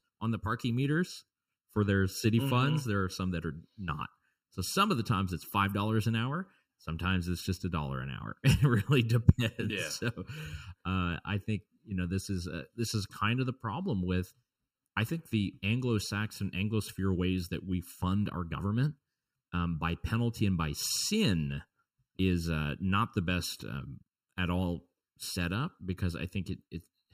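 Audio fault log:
throughout: channel delay (comb filtering); a sub-millisecond lag between channels, summed to mono, notches the speech at even spacings from around 700 Hz, sounding hollow.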